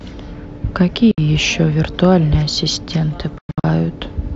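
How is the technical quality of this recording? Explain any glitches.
The recording has two short gaps where the speech drops to silence. Bluetooth dropout is the likely cause, at 1.11 to 1.18 s and again at 3.38 to 3.64 s. Late wireless packets were discarded, so the output cut out and resumed further along, as if the speech had kept playing. The first is a clean 64 ms hole. The second scatters about 213 ms of silence across 256 ms, its longest gap 107 ms, which fits several lost packets.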